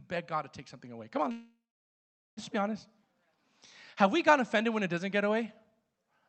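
From 1.31 s to 2.39 s the speech halts in a call audio freeze: the last sound trails on briefly as a fading buzz or hiss, then settles into about 0.81 s of silence before resuming with "let's be honest". The likely cause is delayed packets draining the jitter buffer. Unlike a dropout, nothing is cut out; the speech picks up exactly where it stopped, so everything after arrives about 1.06 s late.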